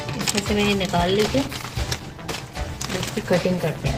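The audio starts clean, then at about 0.96 s drops abruptly into sound with more codec artefacts with no gap, an adaptive stream at a lower bitrate, which points to roughly 64 down to 16 kbit/s Opus.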